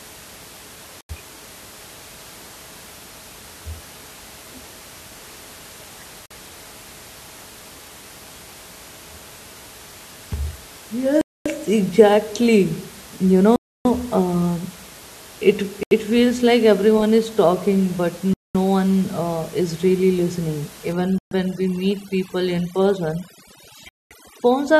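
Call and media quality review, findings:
Dropouts to full silence, 48 to 292 ms, sound resuming where it stopped: 1.01, 6.26, 11.21, 13.56, 15.83, 18.34, 21.18, 23.89 s; longest 13.56 to 13.85 s. Bluetooth stall, likely RF interference delaying packets until the headset buffer ran dry and playback paused for retransmits.

From 20.93 s to the end, the room noise, about 22 dB below speech before this point, collapses to near silence with twinkling specks. Overdone noise removal: suppressor set too aggressive, gating noise-level frequency bands off along with quiet speech detail.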